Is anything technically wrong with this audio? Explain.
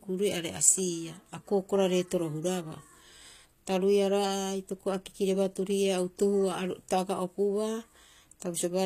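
Yes. Throughout the speech there is plainly audible HE-AAC compression damage, likely from a low-bitrate encode; the sound fits about 24 kbps. Nothing exists above 14.9 kHz, and the treble is synthesized from lower bands by spectral band replication, so sibilants sound gritty, metallic and lispy.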